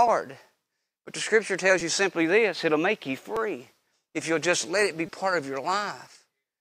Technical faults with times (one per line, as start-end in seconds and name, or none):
1.80 repeated buffer
3.36 repeated buffer
5.07 repeated buffer